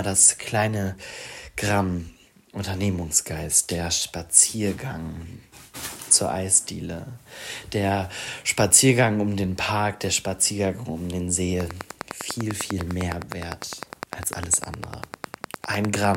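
From 11.61 s to the end at 16.16 s, a steady ticking rides over the sound, in the pauses as well: a train of clicks, around fifty near-identical pops at a regular rate of about 10 per second, standing roughly 15 dB above the audio. The likely cause is interference from nearby equipment.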